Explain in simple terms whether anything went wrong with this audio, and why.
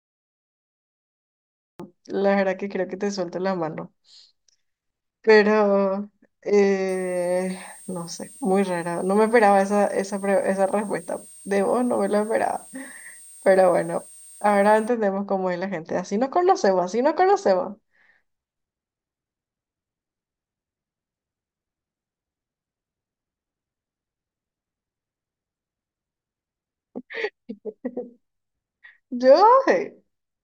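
Two things went wrong. The first is a cut-off start. The clip opens with dead silence until 1.80 s, then the speech jumps in abruptly in the middle of a sound, with no natural lead-in. The recording simply began a moment too late.

The second is a switching supply whistle. From 6.89 s to 14.88 s a thin, high whistle sits behind the speech, wandering slightly between about 8.6 and 8.7 kHz. A switching power supply running at an audible rate is leaking its whistle into the recording.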